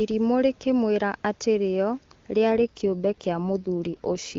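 From 2.52 s to the end at 4.38 s, an AMR rate drop turns the clear HD Voice speech rougher and more synthetic, pointing to a fall from 23.85 to 8.85 kbit/s. Unlike dropouts or bandwidth switching, there are no gaps and no narrowing.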